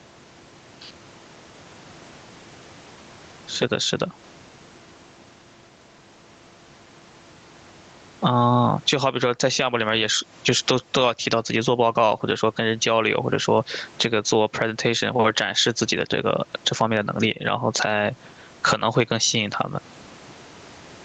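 Gain pumping runs through the whole recording. The gain swings by around 15 dB. The likely cause is microphone gain set far too high, with a fast limiter clamping each peak and squashing loud and quiet passages together.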